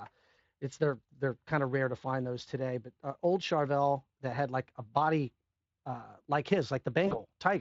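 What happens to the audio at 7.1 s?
Right after "a body uh like", VoIP packet loss concealed by the speech codec runs from 7.07 to 7.20 s: about 40 ms of lost audio is extrapolated from the last pitch, leaving a fading smear of buzzy tone or coloured noise.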